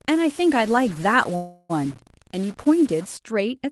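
From 0.0 to 3.17 s the speech carries distortion, and its pauses fill with hiss, most likely a stuck bit in the converter or data line. At 1.35 s a call audio freeze holds the last sound as a fading buzz or hiss for about 340 ms, likely from delayed packets emptying the jitter buffer, before the speech resumes at 1.71 s with nothing missing. Through all of this the call codec limits the band to about 12 kHz.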